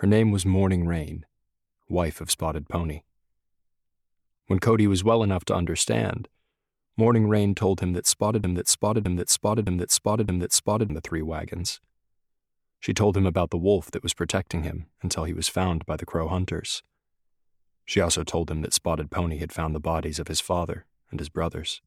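At 8.44 s it turns into a broken-record loop: a 615 ms fragment repeats four times until 10.90 s, likely a stalled player resending its last buffer.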